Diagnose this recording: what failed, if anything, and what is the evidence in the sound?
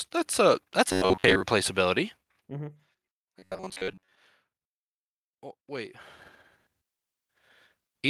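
Electrical switching spike at 0.33 s, just before "a that's": a single sharp snap in the analogue wiring, likely an arc from a nearby switch or motor.

Robotic sound from repeated short buffers at 0.89–1.43 s, after "a that's", and 3.39–4.17 s: a metallic 94 Hz buzz, likely from the driver re-playing about 10.7 ms buffers while most of the new audio is skipped.

Zipper noise at 2.03–2.92 s: ticking during a drop of roughly 15 dB, applied in about 50 unsmoothed steps per second, pointing to gain processing.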